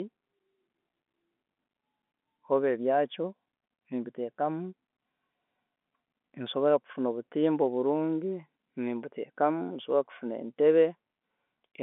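Nothing here stands out as a technical problem: the speech sits in the expected telephone band of roughly 250 Hz to 3.5 kHz, which fits ordinary G.711 mu-law coding at 64 kbps, and any trace the codec leaves is faint at most.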